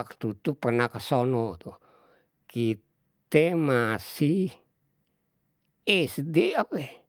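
No technical fault can be heard anywhere in the speech recording, with the signal arriving continuous and intact throughout.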